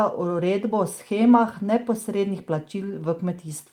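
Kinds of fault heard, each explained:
Clock drift between sender and receiver: the sender's clock runs about one and a half percent slower than the receiver's, so the jitter buffer keeps draining and the speech stretches.
Repeated timing corrections: the receiver keeps repeating short pieces from 0.25 to 3.37 s, adding roughly 70 ms, so the speech plays at 98% speed with slight uneven hiccups.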